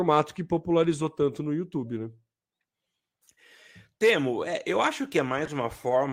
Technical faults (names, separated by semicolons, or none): corrupt frame decoded